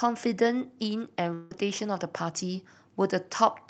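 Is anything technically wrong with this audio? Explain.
Yes, there's one gap. From about 1.33 to 1.52 s the audio stops arriving, likely a long network dropout. The receiver fills nearly the whole stretch by extending the last sound into a fading buzz or hiss, so there's no true silence, and the speech then resumes with that piece simply missing. Above the gap, the call path's high end stops around 8 kHz, which fits Opus at a moderate call bitrate.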